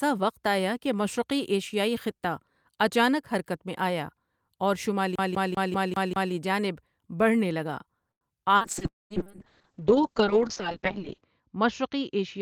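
From 5.16 to 6.33 s the speech gets stuck like a CD stuck on one turn. The same chunk of about 196 ms plays six times over, with a tiny mute at each jump, giving that quick, even stutter before "جانب بڑھنے لگا" carries on.

Right after "جانب بڑھنے لگا", at 8.11 to 8.24 s, there's a short stall from a late packet. The jitter buffer ran dry, so the last bit of sound got stretched for about 97 ms until the packet showed up. Nothing's actually lost, but the sound hangs a touch too long with a faint buzz or dip.

From 8.59 s to the end, the call bitrate drops hard, from 40 kbps down to 6 kbps. It sits at that lowest rate for about 2.6 s. The encoder codes much more coarsely and the bandwidth shrinks from 20 kHz to 8 kHz, so the speech turns muffled and a bit watery.

Inside that, from 8.87 to 9.13 s, the sound briefly trails into a fading buzz or hiss and then drops to near silence for roughly 0.19 s. 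It comes back further along with about 240 ms gone. That's likely a long network dropout, with the receiver stretching the last sound before giving up.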